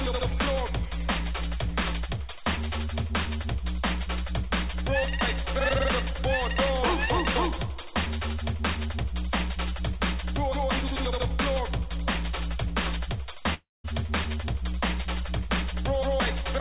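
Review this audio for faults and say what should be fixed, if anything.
From 13.54 to 13.86 s the sound gives way to a fading buzzy continuation of what came just before, and the last 0.19 s of that stretch is near silence. When the audio resumes, roughly 0.3 s of material is simply gone. This is most likely a long network dropout: no packets arrived, so the receiver stretched the last sound to cover the gap, let it decay, then carried on without the lost part. The audio above it is band-limited with nothing over 4 kHz, which fits a G.711 mu-law call path at 64 kbps. To prevent the dropout, stabilise the network link or add redundancy such as forward error correction so brief losses can be recovered.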